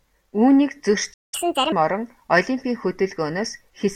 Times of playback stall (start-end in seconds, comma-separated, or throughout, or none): 1.13-1.34